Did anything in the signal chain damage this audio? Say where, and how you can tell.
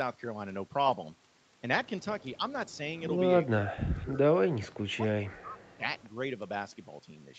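Yes, at the call-processing stage. The speech ducks briefly at 2.37–2.41 s, pulls down hard in broken pieces across 3.57–4.23 s and 4.63–5.6 s (about 30 dB), and dips again at 5.77–5.83 s (about 15 dB). This is likely speech suppressed in double talk: the echo canceller couldn't separate the near talker from loudspeaker echo and turned both down. The waveform envelope collapses in ragged chunks, and the spectrogram shows sudden dark gaps.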